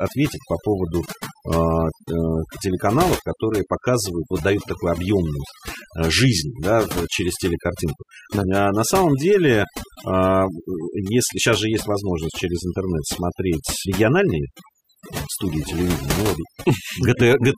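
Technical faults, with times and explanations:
Throughout, overdone noise removal: the noise reduction was set too hard, pulling individual frequency bands to nothing whenever they dipped near its noise estimate. Pauses fall to near silence dotted with twinkling specks, and softer parts of the speech vanish.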